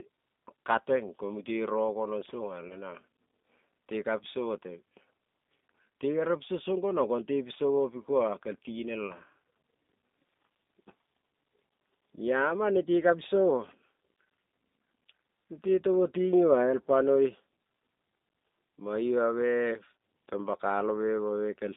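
G.729 coding runs through the whole clip, and its damage is plainly audible. The line carries only about 200 Hz to 3.7 kHz, so the speech is muffled at the top and thin at the bottom. The rough, slightly synthetic texture points to an 8 kbit/s G.729A stream, where each 10 ms frame is rebuilt from a vocal tract filter, a pitch predictor and a handful of pulses rather than from the original waveform.

VoIP packet loss concealed by the speech codec appears first at 2.68 to 2.74 s. About 20 ms of audio is missing, which fits a single lost packet. The decoder fills the gap by extending its last pitch and filter settings at falling gain, which produces a brief stretched sound that fades. Because each frame builds on the one before it, the speech stays weak and distorted for a short while after the stream resumes.

The same concealment recurs at 9.07 to 9.16 s, again consistent with one lost 20 ms packet. 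The fading concealment here lasts a little longer before the decoder recovers and the speech returns to its normal coded level.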